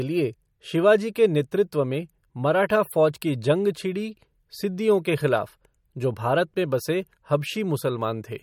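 Throughout the speech, the sound is watery and swirly, s sounds chirp metallically and onsets smear. This is likely MP3 compression at a bitrate near 48 kbps. Unlike a plain low-pass filter, weak frequency lines flicker between frames, not just the treble cut at 18.7 kHz.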